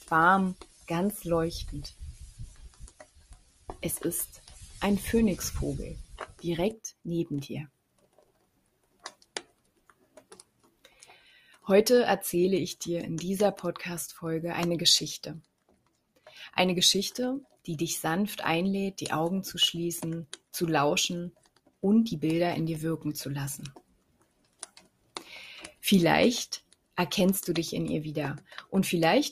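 Right from the start there's a noise suppressor applied to music or sounds, a speech-style noise reduction left running across the whole clip. It reads anything steady, like sustained tones, ambience or reverb tails, as noise and pulls it down, while sharp onsets slip through. The result is a level that keeps pumping and sinking, with the suppression swinging by something like 15 dB, so the sound keeps thinning out and coming back.

The individual spots where sound is cut by the noise suppressor fall at 0.0 to 4.82 s, 5.99 to 11.66 s, 15.42 to 16.33 s, 17.44 to 17.67 s, 20.3 to 21.83 s, 23.73 to 26.97 s and 28.39 to 28.72 s. In each one the held or decaying material gets ducked hard, by about 14 to 18 dB at its deepest, and tails get clipped short. The two long stretches near the start spend most of their length pushed down, while the brief ones at 17.44 and 28.39 s are quick dips of a fraction of a second.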